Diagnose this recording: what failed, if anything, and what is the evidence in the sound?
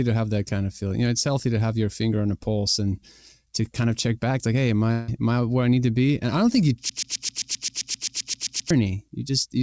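Network stage, a likely long network dropout: from 4.92 to 5.10 s, right after "back like hey am", about 0.16 s of audio never arrives and the gap is filled with a fading concealment buzz, not silence. The sound resumes at "am I where I" with that stretch lost, rather than repeating.

Playback or stream stage, a likely broken-record loop: after "I don't think you", a 131 ms fragment repeats exactly, back to back, 14 times from 6.89 to 8.71 s, and all new audio is lost. Unlike concealment, this repetition never decays. The call path's band limit at 8 kHz fits G.722.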